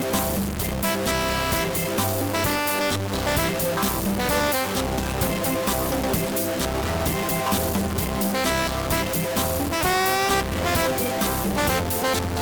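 From start to finish the audio carries a distortion that tracks the waveform, and quiet stretches fill with a noise floor rather than falling silent. The likely cause is a stuck bit, one data bit held at a fixed value so roughly half the samples are offset by that bit's weight.

Also present throughout is a regular buzz at 100 Hz that rises and falls with the signal level. This is a filter restarted on every block: it drops its state at each block boundary and begins from silence, putting a small transient at the start of every block, 100 per second.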